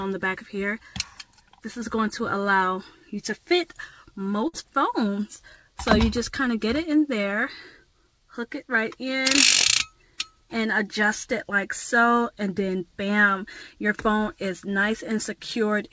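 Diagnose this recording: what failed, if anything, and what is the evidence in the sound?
A burst of packet loss at the network stage falls between 4.48 and 4.55 s. For 54 ms the receiver's concealment extends the last sound and lets it fade. The audio then jumps ahead, and 60 ms of material is gone. A spectrogram shows smeared, repeated spectral frames dimming out, ending in a sharp discontinuity, all below the 8 kHz ceiling of the G.722 call path. The waveform shows a shrinking envelope, then an abrupt restart.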